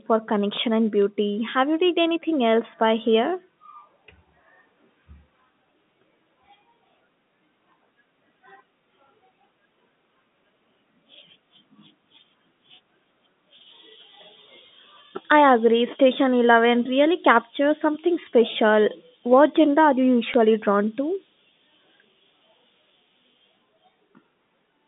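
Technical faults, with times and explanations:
1.02 to 1.08 s, bit errors on a digital phone line: a brief stretch where a few bits in the 8-bit mu-law samples were flipped at a very low error rate. Each corrupted sample jumps to a wrong level, and a hit on the sign or upper bits gives a sharp tick over the unchanged, 4 kHz-limited telephone speech.
20.34 s, bit errors on a digital phone line: a short spot of the same kind of corrupted samples.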